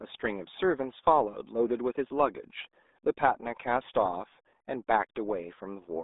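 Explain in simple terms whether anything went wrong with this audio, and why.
From start to end, the speech passes through the RealAudio 14.4 codec: nothing above 3.8 kHz survives, and unlike a simple phone line, it sounds gargly and smeared.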